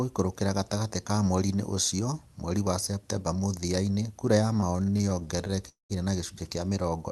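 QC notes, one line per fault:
4.53–5.59 s, repeated stalls (stutter): across this span the sound catches and restarts 17 times in quick succession, each hitch short, the longest about 19 ms, adding up to roughly 200 ms of stretched-out sound, about a fifth of the span. Packets kept arriving late, so the jitter buffer kept running dry and the receiver extended the last sound to cover each hole. Nothing is dropped; the audio drags and judders.
5.69–5.92 s, call audio freeze: the sound holds, turns into a fading buzz or hiss and then drops into about 150 ms of near silence before resuming exactly where it stopped, having added roughly 210 ms in all. The likely cause is packets held up in transit long enough to empty the jitter buffer, with the receiver extending and fading the last sound until they arrived. The overall delay grows by that same 210 ms, and no audio is lost.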